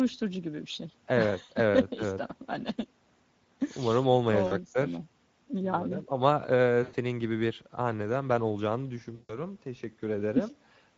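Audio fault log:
throughout, Speex codec: the speech has a noisy, hoarse, gritty edge, with plainly audible coding damage. That fits a mid-quality Speex setting around 17 kbps, where the CELP excitation has limited bits and the voice loses its clean texture.
1.43–1.52 s, 4.47–4.55 s, 6.83–6.95 s, 9.15–9.39 s, VoIP packet loss concealed by the speech codec: short gaps of about 60, 40, 100 and 140 ms get filled with a stretched, fading sound. The decoder repeats its last pitch and filter while turning the gain down, and the voice stays weak or distorted just after each gap.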